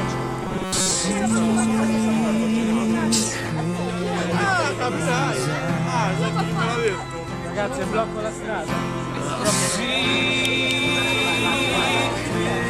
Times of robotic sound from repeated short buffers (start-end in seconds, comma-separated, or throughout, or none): 0.43-0.91